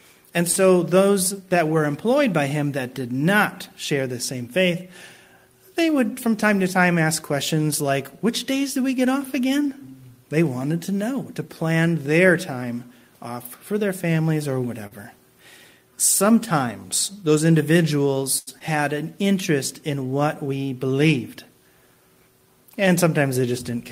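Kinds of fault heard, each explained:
Short stall from a late packet: the jitter buffer ran dry and the last sound was held until the packet arrived, so nothing is lost. Here a sound drags at 0.51 s (48 ms), 14.87 s (39 ms) and 18.38 s (88 ms), unlike a speed change, which alters pacing over a longer stretch.
Jitter buffer speed-up: with too much audio queued, the receiver trimmed short pitch-period pieces repeatedly to cut delay. From 5.88 to 6.44 s the sound runs about 6% fast at unchanged pitch, roughly 40 ms shed in total. It gives a hurried stretch rather than a single held moment.
Short concealed packet loss: audio never reached the decoder in time, and the gap was bridged by extending the preceding sound, then blended back. At 18.59 s about 40 ms goes missing with only a brief smear, unlike a stall, where the sound is held but nothing disappears.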